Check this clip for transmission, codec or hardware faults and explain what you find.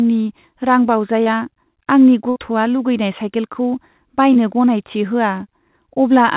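Three transmission faults affect this speech clip, all from packet loss, heard through a call path whose content stops at 4 kHz.

At 1.24–1.28 s and 4.34–4.37 s there is short concealed packet loss. About 20 ms of audio never arrived. The receiver extended the preceding sound for roughly 16–19 ms before blending back into the real audio. This is heard as a brief smear or wobble. On a spectrogram it shows as a thin stretch where the harmonics repeat or blur instead of evolving.

At 2.30–2.38 s there is a burst of packet loss. About 60 ms went missing, and the receiver filled it by continuing the last sound while turning it down. This produces a held buzz or fading hiss, and the speech then resumes further along. The waveform shows a decaying, repetitive segment, and the spectrogram shows frozen, fading bands followed by an abrupt restart.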